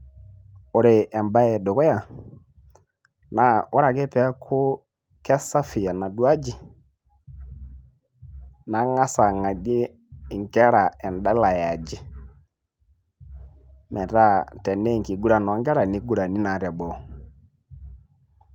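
No technical faults can be heard anywhere in this speech recording. There are no events to place in time, so there is nothing to describe in sequence.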